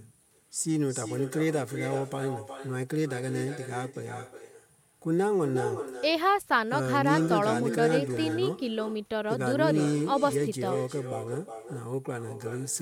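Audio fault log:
throughout, echo with no canceller: the far end's loudspeaker feeds its microphone unremoved, so every phrase returns roughly 400 ms later, about 10 dB quieter and thinner.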